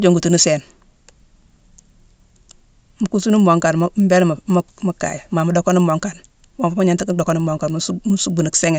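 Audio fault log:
Throughout: resampler restarted on every block. The 16 kHz to 48 kHz conversion was run on each 100 ms block in isolation, so at every block edge the interpolator lacked the real neighbouring samples and produced a small error there. This gives a steady tick train at 10 Hz that sits under the speech and vanishes in pauses. Its strict regularity and dependence on signal separate it from random dropout clicks or the occasional slips of clock drift.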